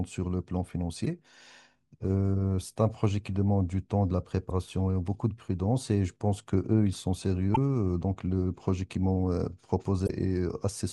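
Damaged data in a compressed stream causes brief glitches at 1.02, 4.48, 7.53 and 10.05 s. Each lasts about 40 to 50 ms. Corrupted bytes make the decoder misread frames. It loses sync and hunts for the next valid frame header.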